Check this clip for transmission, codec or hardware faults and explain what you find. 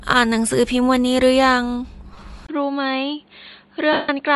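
The clip has three faults: codec damage throughout, two dropouts of lost frames, and a mid-recording drop in quality.

Bluetooth LC3 compression runs through the whole clip, likely from LE Audio's transform codec in short frames at a bitrate that sounds near 48 kbps. It discards much of the upper spectrum and fills it with synthetic noise, so the speech has a plainly audible breathy, grainy edge.

Lost LE Audio frames occur from 2.13 to 2.21 s, as scattered gaps totalling about 52.5 ms, the longest about 15 ms, and again from 3.93 to 4.09 s, where about 158 ms is lost. During each gap the decoder repeats the last spectrum with randomised phase. The first event is a brief noisy smear. The longer one dies away towards silence.

An input switched to a poorer device at 2.47 s, likely a change to another microphone or a headset call profile. A 20 ms silence marks the switch. After it, nothing is present above 4.5 kHz, the sound is a few decibels quieter and boxier, and a new noise floor sits well below the speech.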